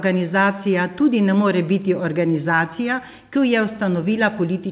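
At 2.56 to 2.59 s there's short concealed packet loss: about 20 ms never arrived, so the decoder stretched the preceding sound across the hole, leaving a brief smeared wobble in the speech over the call path's 4 kHz-limited, G.711-style audio.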